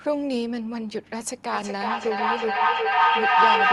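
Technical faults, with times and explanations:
1.53 s to the end, feedback howl: a second device in the room feeds the call back into itself, each trip adding gain, so a tone around 1 kHz swells, repeating roughly every 0.4 s, and peaks about 10 dB above the speech without dying away.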